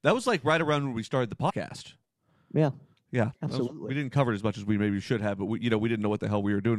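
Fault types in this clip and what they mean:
Compressed frames skipped: after "when we started the", roughly four 23.2 ms frames are lost, so the speech jumps ahead about a tenth of a second.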